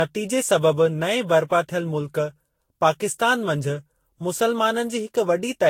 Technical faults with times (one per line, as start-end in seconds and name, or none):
0.00-5.70 generation loss